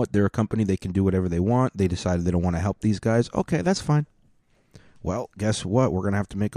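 Speech recording, no faults heard.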